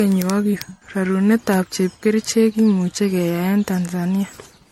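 Throughout the speech, the sound is swirly, smeared and hollow, with blurred attacks and nothing above 16.7 kHz. This is generation loss, likely from repeated MP3 encoding around five times, each pass quantising on a shifted frame grid, which fits a 64 kbit/s chain.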